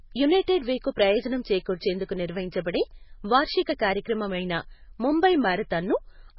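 From start to finish the speech has a hard ceiling at about 5.5 kHz and a watery, swirling texture, with s sounds turning into metallic chirps and attacks smeared. The likely cause is heavy MP3 compression at a bitrate as low as 16 kbps, where the encoder cuts the treble and zeroes weak frequency lines that flicker on and off between frames. A plain low-pass filter would dull the sound without that churning, chirpy residue.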